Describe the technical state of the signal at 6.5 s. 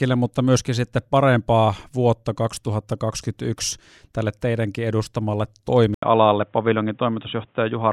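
At 6.5 s the speech is band-limited, likely from the input switching to a poorer device at 5.94 s, just after "tälle teidänkin edustamalle", lasting to the end at 7.93 s. Nothing passes above 3.8 kHz, so the voice sounds dull and boxy, with new noise about 45 dB down. A spectrogram shows a hard ceiling at 3.8 kHz; the waveform shows an 80 ms flat gap and a level step of roughly 5 dB.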